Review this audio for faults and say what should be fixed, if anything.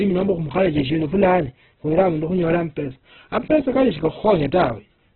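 Opus compression, throughout the clip: the speech is narrowband, with nothing above 4.1 kHz, and heavily damaged, sounding grainy, rough and noisy rather than swirly. This likely comes from Opus in its music (CELT) mode starved of bits, which fits a very low rate of around 8 kbps. With too few bits, the encoder preserves each band's energy but fills in the detail with folded or noise-like content, and it narrows the bandwidth. To prevent this, encode speech at a higher Opus bitrate, or let the encoder use its speech mode at low rates.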